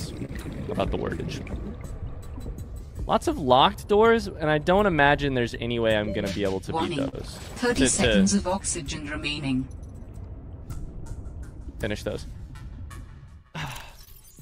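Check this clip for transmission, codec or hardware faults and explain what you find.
There are transmission timing faults: the sender's clock runs slow against the receiver's, which causes three brief stalls and two long stretches of small timing corrections.

Clock drift between sender and receiver runs through the whole clip. The sender's audio clock is about 3 percent slower than the receiver's, so the jitter buffer keeps draining. The receiver must repeatedly pad the stream or hold sound to stay in step. This produces the recurring hiccups described below, spaced unevenly from start to finish.

A short stall from a late packet occurs at 0.25 to 0.30 s, at 7.08 to 7.15 s and at 14.04 to 14.09 s. Each time, a packet had not arrived when due and the buffer ran empty. The receiver held the last sound, for 30 ms, 45 ms and 26 ms respectively, then resumed from the same point with nothing lost. 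Each is heard as a sound briefly sustained too long, with a slight buzz or dip.

Repeated timing corrections span 1.72 to 6.55 s and 8.35 to 13.75 s. Here the receiver plays at 97 percent speed by repeating short slivers, adding roughly 150 ms in the first stretch and roughly 200 ms in the second. The edits all lengthen the audio but fall at irregular spacing. If heard at all, they come across as faint hiccups and a slightly dragging, unsteady tempo.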